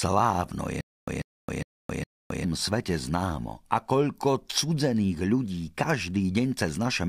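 From 0.81 to 2.45 s, a stutter with silent gaps: a 142 ms burst repeats four times, with 267 ms of digital silence between, before "svete známo". A stalled stream likely replayed its last fragment.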